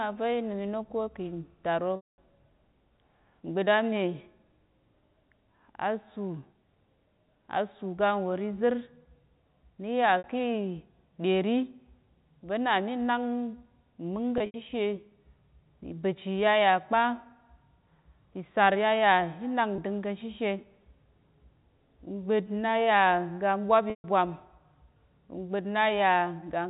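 A held, buzzy tone stands in for the speech at 1.96–2.18 s, 10.18–10.24 s, 14.38–14.54 s, 19.76–19.78 s and 23.90–24.04 s (after "ga ɓwap"). This is packet loss with pitch repetition: the receiver loops the last pitch period to fill gaps of 20 to 220 ms, fading the longest toward silence, all within the band-limited G.711 telephone sound.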